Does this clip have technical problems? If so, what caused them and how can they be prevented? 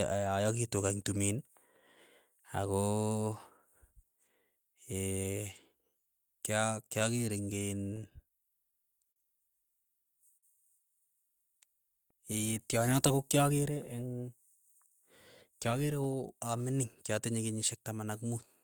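Yes. Between 6.99 and 8.32 s the speech picks up ticks and tiny smears. These are scattered short gaps: about seven lost or late packets, each patched by briefly continuing the previous sound for roughly 10 ms. Forward error correction or a modest retransmission allowance would prevent them.

At 9.12 to 9.18 s and again at 10.37 to 10.45 s a sound hangs on slightly too long, with a faint buzzy dip. Each is a short stall from a late packet: the jitter buffer ran dry, and the receiver stretched the last sound by 41 ms and then 55 ms until the packet arrived. Nothing is lost. A slightly deeper jitter buffer target would absorb these delays.

From 13.18 to 14.29 s the speech sounds hurried while the pitch stays the same, running at about 109% speed. This is a jitter buffer speed-up: after a backlog built up, the receiver cut out short pitch-period slices, about 100 ms in total, to reduce delay. 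Smoother network delivery, or a gentler catch-up rate spread over a longer span, would make this less noticeable.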